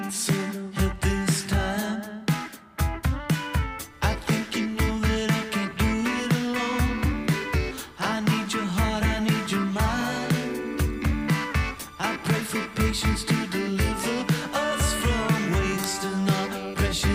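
At 15.84 s there is an uninitialised buffer fault: a single block was sent to the output before any audio had been written into it, so whatever values were left in that memory were played as samples. It is heard as a very brief, loud, sharp click-like crack lasting about 1.33 ms, which fits a 64-sample buffer.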